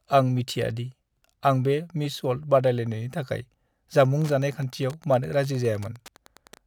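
Wi-Fi interference, 4.12 s onward: the circuit rectifies a radio's 102.4 ms beacon, leaving faint ticking about ten times a second, well below the speech.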